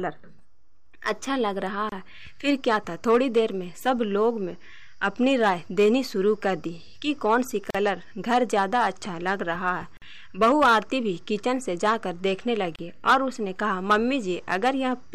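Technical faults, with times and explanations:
1.89–1.92, 7.70–7.75, 9.97–10.02 and 12.76–12.79 s: gap at a join of encoded pieces. Gaps of 27, 42, 48 and 31 ms come from encoder start delay and last-frame padding left in. Unlike a dropout, the sound resumes exactly where it stopped, with smeared edges.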